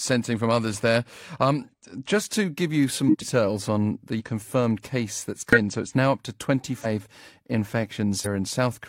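Compressed frames skipped at 1.6, 3.05 (after "to give you some"), 4.16, 5.53 (after "case that's"), 6.81 (after "it's now up to") and 8.21 s. Missing or rejected frames make the speech jump ahead by roughly 40 to 200 ms.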